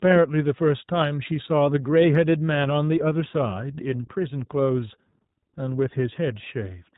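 From start to finish the speech carries the sound of the iLBC codec, and the damage is plainly audible. Everything above 4 kHz is gone, so the sound is narrowband and muffled at the top. The codec rebuilds each short frame's excitation on its own, which leaves a rough, slightly synthetic grain on the voice. The texture fits 20 ms frames at a rate near 15.2 kbps. Intelligibility survives, but the natural smoothness does not.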